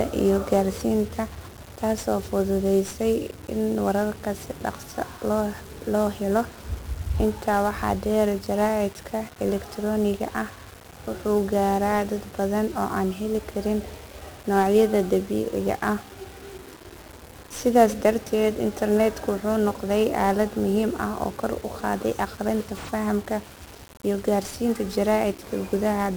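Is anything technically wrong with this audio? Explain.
Yes. The speech carries heavy 1-bit DFPWM compression from start to finish. This codec stores a single bit per sample. Each bit only nudges an adaptive level up or down, so the waveform is traced as a staircase of small steps. That coarse tracking adds strong broadband quantisation noise. The speech sounds fuzzy and crackly throughout. High frequencies sink under a constant hiss. The density of the grain fits a stream of roughly 48 kbps.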